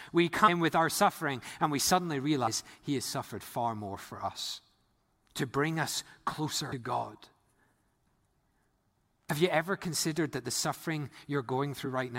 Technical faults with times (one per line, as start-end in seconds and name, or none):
6.71 compressed frames skipped
9.29 compressed frames skipped